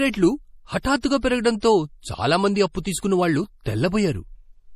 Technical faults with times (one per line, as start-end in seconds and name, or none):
0.00-4.76 MP3 compression
0.83-1.03 pre-echo